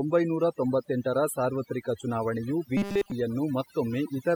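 Overdone noise removal runs through the whole clip: the noise reduction was set too aggressively, pushing individual frequency bands down or off wherever they sat near its noise estimate. The background drops and breaks up into twinkling specks.

From 2.77 to 3.12 s, just after "ಒಂಬೈನೂರ ತೊಂಬತ್ತೆಂಟರ ಸಾರ್ವತ್ರಿಕ ಚುನಾವಣೆಯು", there is robotic sound from repeated short buffers. Fresh audio likely arrived too late, so most of this span is a tiny slice played over and over. The speech becomes a rigid metallic buzz at 200 Hz, which fits a 5 ms buffer.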